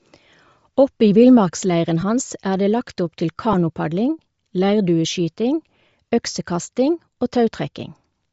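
Bluetooth LC3 compression runs throughout: the speech has a breathy, grainy edge, most likely from LC3 coding near 32 kbps replacing the discarded upper spectrum with noise.

Lost LE Audio frames occur at 2.01–2.03 s, just before "hans er det", and at 3.53–3.55 s, just after "opp til". The decoder refilled these gaps, about two frames and one 10 ms frame, with reused spectrum carrying random signs, leaving brief noisy smears.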